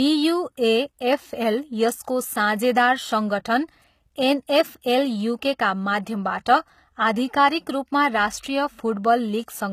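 Throughout the speech, the treble sounds rebuilt rather than recorded, and nothing remains above 14.9 kHz. The likely cause is HE-AAC compression at a low bitrate near 20 kbps. Upper bands are copied from lower ones and coarsely reshaped. The damage is plainly audible.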